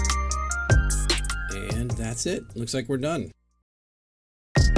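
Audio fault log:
No audible faults detected.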